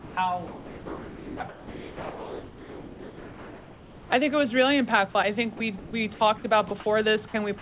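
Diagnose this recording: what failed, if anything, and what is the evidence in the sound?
The problem sits in call processing on the sending side, most likely sound dropped by the voice detector. The sound gives way to flat, steady noise at 0 to 0.17 s, 0.47 to 1.4 s, 1.49 to 4.1 s, 5.57 to 5.6 s, 5.78 to 5.93 s and 6.68 to 6.71 s, then snaps back. The detector judged real sound to be background and stopped sending, so the receiver filled those gaps with comfort noise, all of it band-limited to 4 kHz by the call path.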